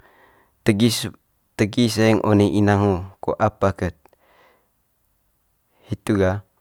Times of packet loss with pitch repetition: none

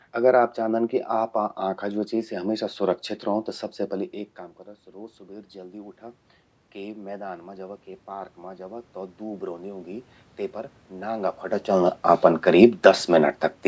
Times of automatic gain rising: 6.73-10.15

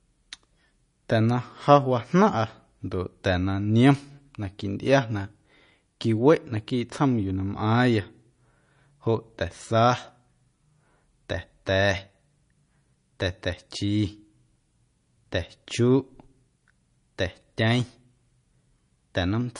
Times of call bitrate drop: none

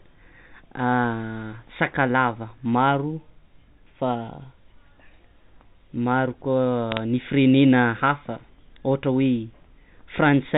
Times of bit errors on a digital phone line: 6.92-7.00

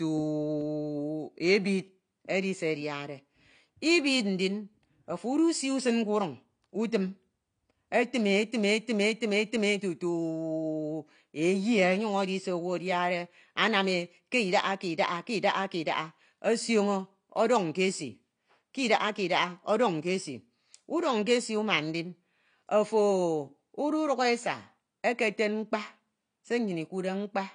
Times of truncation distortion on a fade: none

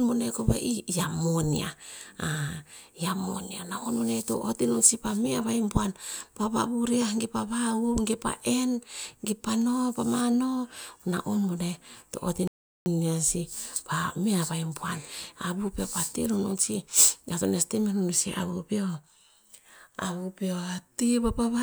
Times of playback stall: 12.47-12.86

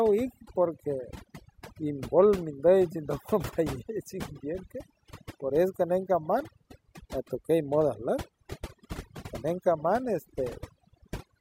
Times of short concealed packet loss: none

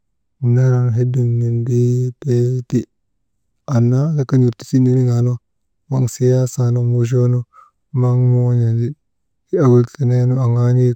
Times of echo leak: none

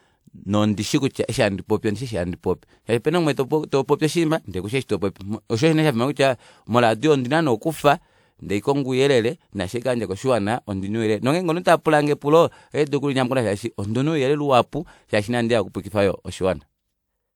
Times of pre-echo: 11.63

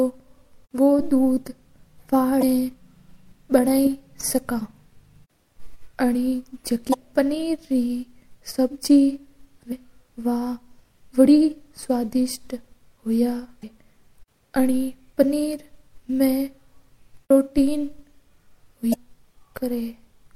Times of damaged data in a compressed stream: 2.39-2.43, 6.90-6.94, 13.60-13.64, 18.90-18.94

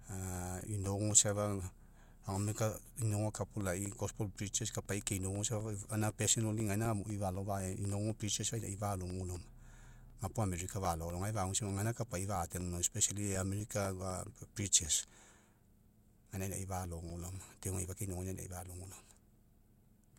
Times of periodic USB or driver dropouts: 0.10-20.10

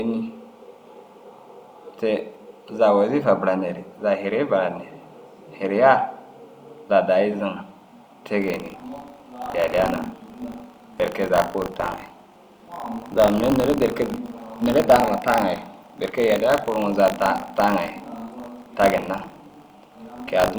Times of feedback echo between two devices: none

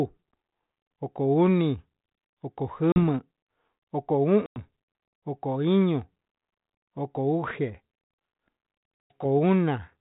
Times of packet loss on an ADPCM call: 2.92-2.99, 4.46-4.58, 9.03-9.25

